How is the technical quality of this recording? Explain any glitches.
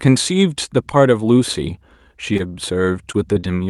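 The speech carries a cluster of brief network glitches in its second half, heard through a call codec whose top end stops near 12 kHz.

Short concealed packet loss at 2.33, 3.12, 3.34 and 3.40 s: about 20 ms never arrived, so the decoder extrapolated the last sound, leaving quick smears or wobbles.

Short stalls from a late packet at 2.37 and 2.47 s: the jitter buffer ran dry and stretched the sound about 20 ms, giving a held, slightly buzzy moment.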